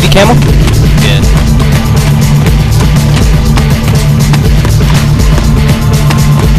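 Hard clipping runs throughout: the signal is driven about 14 dB past the available headroom, flattening roughly a sixth of all samples and producing harsh fuzz on every loud passage.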